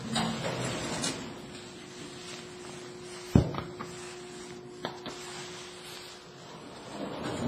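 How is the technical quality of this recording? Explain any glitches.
The technical quality is poor, with heavy codec damage running through the whole recording.

Throughout, the audio has a ringing, washy character, and a hiss rises and falls with the signal. It is likely WMA compression, an early version of Windows Media Audio, at a low bitrate that fits something around 24 kbps. The transform coder spreads quantisation noise over long blocks, smearing it tens of milliseconds around each sound, and discards weak spectral detail. Nothing is present above 15.3 kHz.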